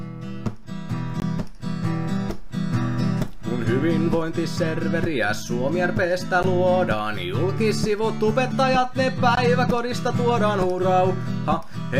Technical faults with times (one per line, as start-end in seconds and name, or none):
1.20-1.22 block of digital silence
6.43 block of digital silence
9.35 block of digital silence